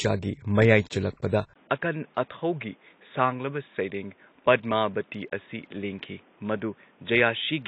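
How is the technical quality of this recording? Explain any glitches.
Two problems here: codec damage across the whole clip, and a switch to a weaker input device partway through.

AAC compression: Throughout, there's plainly audible codec damage, with nothing above 8.3 kHz. The dull, smeared quality fits AAC-LC at a low bitrate, around 24 kbps. The encoder is likely running short of bits, so it drops the top end and coarsens what's left.

Input switched to a poorer device: At 1.54 s there's a 20 ms gap. After it, the speech is capped at 3.8 kHz, about 5 dB quieter, and a new noise floor appears roughly 35 dB below the speech. This likely comes from the recording moving to a narrower-band device, like a headset call profile or another mic.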